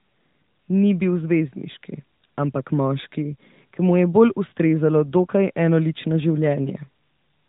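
The speech carries no technical faults, and the narrowband mobile coding it passed through, consistent with AMR-NB at around its 12.2 kbps mode, leaves only a light coding texture and the expected absence of content above 4 kHz.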